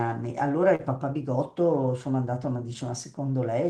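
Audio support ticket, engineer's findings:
Short concealed packet loss, 0.75–0.81 s: about 40 ms of audio arrived too late for the decoder, so the jitter buffer's concealment extended the preceding sound for about 38 ms, then crossfaded back. Heard as a brief smear or wobble in the speech.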